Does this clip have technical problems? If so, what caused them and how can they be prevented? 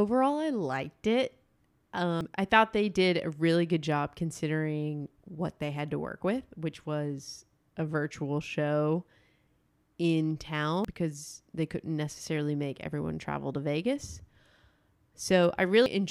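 Yes. Compressed frames skipped: at 2.21 s, 10.85 s and 15.86 s the decoder dropped whole frames of the compressed stream, either because they were missing from the file or because it rejected them as damaged. The speech jumps ahead about 200 ms before "I thought they did", about 300 ms before "because they couldn't necessarily", and about 200 ms at 15.86 s. Those gaps fit frames of roughly 93 ms. To prevent this, check file integrity with checksums and send or store the audio with error correction or retransmission.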